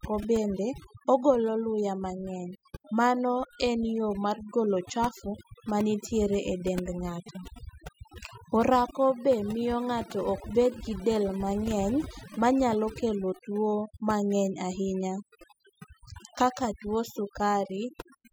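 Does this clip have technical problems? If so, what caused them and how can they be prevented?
Yes. Overdone noise removal runs throughout this speech clip. The denoiser pushes any frequency band near its noise estimate far down, and quiet parts of the voice vanish too. The background drops and breaks up into twinkling specks. Set the reduction gentler and check the result by ear before applying it.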